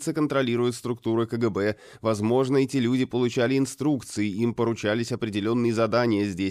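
No dropouts, clicks, distortion or other technical faults can be heard anywhere in the audio.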